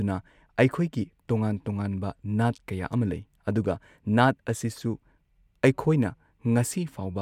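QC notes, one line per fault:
No technical faults are audible, and the signal holds steady in level and continuity throughout.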